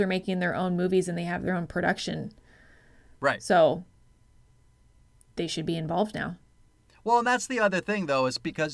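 Nothing in the speech stood out as a technical fault on listening.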